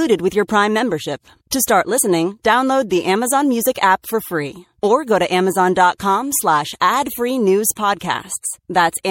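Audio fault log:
throughout — MP3 compression: the speech has a watery, swirling quality, with sibilants turning metallic and chirpy, while consonant onsets sound smeared. This is likely the work of a lossy MP3 encoder running short of bits, at a rate that fits around 64 kbps, so it has let weak frequency lines drop in and out from one frame to the next, which gives that flickering texture.
1.98 — compressed frames skipped: right before "download the", the speech jumps forward with a short, smeared blip instead of a clean click. About 30 ms of audio is simply missing, roughly one compressed frame of 26.1 ms that was lost or rejected by the decoder. Because adjacent frames overlap, the join is blurred over rather than sharp, so the gap comes across as a brief hiccup in the flow.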